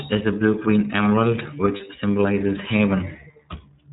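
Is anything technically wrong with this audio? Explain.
Yes. The speech has passed through the iLBC codec throughout, and one stretch has lost iLBC frames.

Across the whole clip, the narrowband iLBC coder has rebuilt the speech from a model of each short frame's excitation. Everything above 4 kHz is gone, so the sound is muffled and lacks crisp sibilants. The coding damage is plainly audible as a rough, slightly synthetic buzz. The character fits the 30 ms frame mode at about 13 kbps.

From 1.77 to 1.80 s, about 30 ms of audio failed to arrive, consistent with a single lost packet. The decoder covered the hole by repeating the last pitch cycle mixed with noise. That gap sounds like a brief held, buzzy vowel. Because each iLBC frame decodes independently, normal speech returns immediately afterwards.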